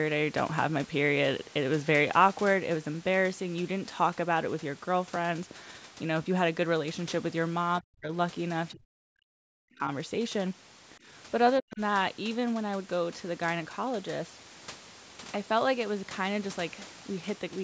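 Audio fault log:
7.80–8.11 s, 8.72–9.88 s and 11.59–11.80 s, speech suppressed in double talk: the speech sinks abruptly, almost to silence at its deepest, in three stretches of about a third of a second, about a second and about a fifth of a second. It likely happened because the far end was talking at the same time, and the echo canceller, unable to separate this talker from the returning loudspeaker echo, pulled down everything it picked up.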